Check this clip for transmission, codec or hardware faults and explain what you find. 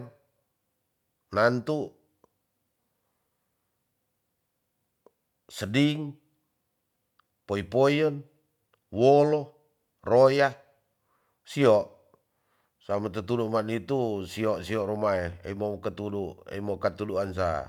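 No faults can be heard anywhere in this recording.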